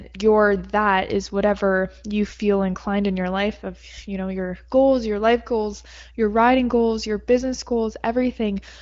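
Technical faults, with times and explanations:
Nothing stood out on listening to this speech, which is carried over the AMR wideband (HD Voice) codec at a high rate with no content above about 7.5 kHz.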